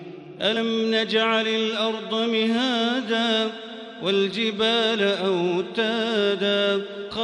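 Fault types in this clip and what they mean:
Damaged data in a compressed stream: corrupted bytes in the encoded stream cause the decoder to misread frames and lose sync until it locates the next valid frame header, heard as a very brief blip in the sound at 0.55 s and again at 7.10 s.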